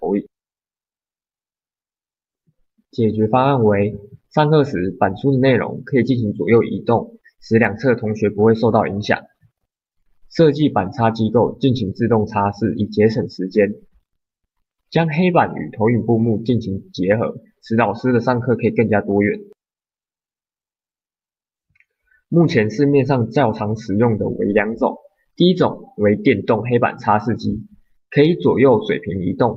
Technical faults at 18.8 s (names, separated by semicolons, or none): none